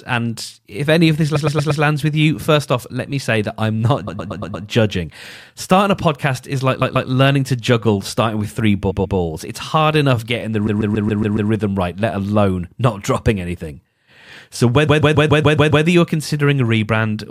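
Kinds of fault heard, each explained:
Repeated frames: a short run of compressed audio gets decoded over and over, so the speech stutters in place before moving on. Here it happens six times, looping a chunk of about 116 ms early on and 139 ms later, which fits a run of five or six frames. Near "a podcast is like" it repeats twice, and after "hard enough getting the" it repeats six times. Each loop adds its length to the clip.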